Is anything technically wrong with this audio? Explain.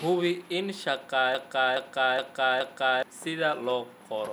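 Yes. From 1.35 s to 3.03 s there is a broken-record loop. The likely cause is a player, encoder or stream stalling and resending the last fragment it still held instead of fresh audio. The speech stops moving forward and one 0.42 s slice plays four times back to back, identical each pass, for about 1.7 s. Whatever should have been heard in that span never arrives.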